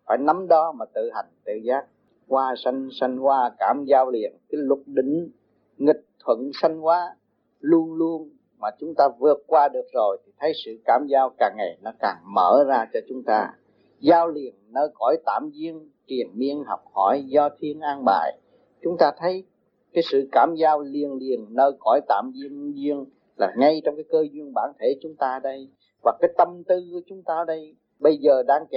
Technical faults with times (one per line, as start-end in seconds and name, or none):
none